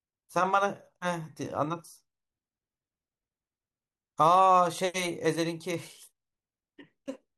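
No technical faults are audible.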